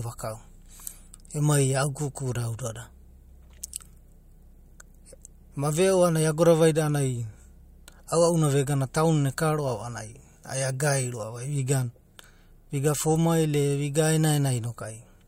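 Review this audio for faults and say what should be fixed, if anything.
Nothing needs fixing, as the speech signal holds steady throughout with no technical faults to be heard.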